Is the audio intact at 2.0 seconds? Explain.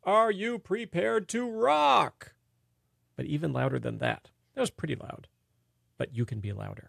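Yes, at 2.0 seconds the speech plays through cleanly with no audible fault.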